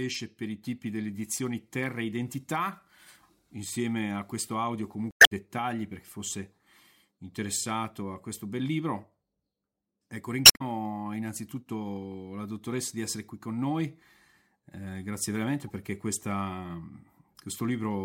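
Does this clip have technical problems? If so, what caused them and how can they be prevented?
Yes. Damaged data in a compressed stream breaks the speech twice: 5.08–5.32 s, after "a questo audio", and 10.42–10.61 s, before "innanzitutto la dottoressa di". Each is a short glitch. Corrupt bytes make the decoder misread frames and lose sync. Checksummed transfers would prevent it.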